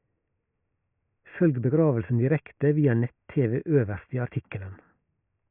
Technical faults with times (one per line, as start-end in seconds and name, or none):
none